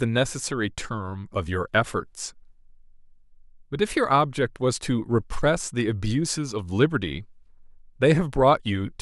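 No technical faults can be heard anywhere in this speech recording. There is nothing in the sound that needs a timestamp or closer attention.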